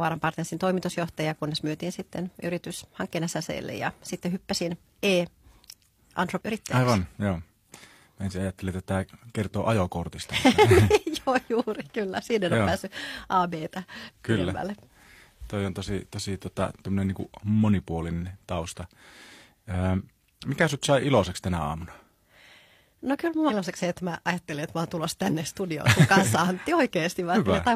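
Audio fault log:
6.37 to 6.41 s, 14.03 to 14.09 s and 23.46 to 23.51 s, damaged data in a compressed stream: corrupted bytes in the coded speech stream make the decoder misread frames and lose sync until it finds the next header, leaving a brief chirp or squawk of 46 to 66 ms.
25.26 s, electrical switching spike: a sharp single snap lands on top of the speech, a short arc from a nearby switch, motor or static discharge being the likely source, picked up by the audio line as an instantaneous transient.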